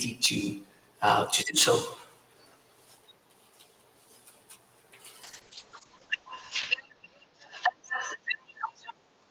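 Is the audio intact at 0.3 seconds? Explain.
No, not cleanly. Microphone overload runs from 0.24 to 0.27 s, ending right at the moment asked. The loudest peaks there push about 6 dB beyond the converter's limit. The likely cause is input gain set too high, so the converter shaves off their tops. That gives a brief harsh, crackling edge. On a waveform the peaks appear flattened. A spectrogram shows a short broadband smear of added high harmonics across those few hundredths of a second.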